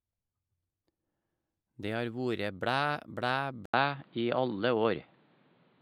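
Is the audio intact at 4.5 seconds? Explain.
No. From 3.66 s to the end of the clip, the input has likely switched to a poorer device: after an 80 ms gap the speech turns dull, with nothing above 4.7 kHz, a level shift of around 5 dB, and a new noise floor some 35 dB down.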